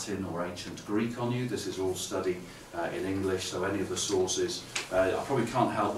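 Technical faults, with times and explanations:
No technical faults, with times and explanations, can be given, as none are heard.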